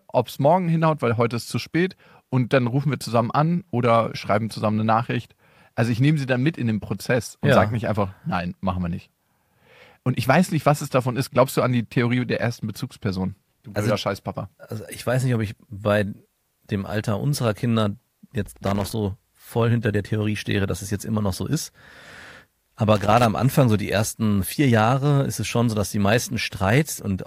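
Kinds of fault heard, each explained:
Loose connector crackle: Two short, irregular bursts of scratchy crackling break into the speech, the first from 18.46 to 18.91 s and the second, shorter one from 22.95 to 23.25 s. Each lasts under half a second. The sound comes from a worn or dirty contact in a plug or socket that rapidly loses and regains connection as it shifts. This chops the signal in fast, uneven bursts, and any DC present on the line adds pops.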